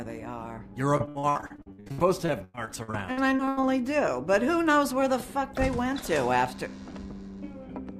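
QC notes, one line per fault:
0.97–3.73 s, repeated packet loss (robotic sound): the audio turns choppy and robotic, with pieces dropping out in quick succession over this stretch. Packets went missing or arrived too late again and again, 27 holes, the longest about 95 ms. Each hole was patched by extending the sound just before it, so about a third of the span is synthetic carry-over, and the next hole comes before the sound can settle.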